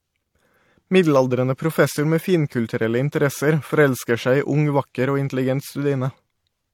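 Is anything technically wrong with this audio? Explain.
Yes. Throughout the speech, transcoding between lossy codecs likely occurred: the sound fits an MP3 encode around 64 kbit/s re-encoded as HE-AAC around 40 kbit/s. The second encoder wastes bits reproducing the first encoder's smearing and adds its own, so MP3 swirl and HE-AAC's thin, synthetic-sounding top end are heard together, capped by the narrower bandwidth of the two.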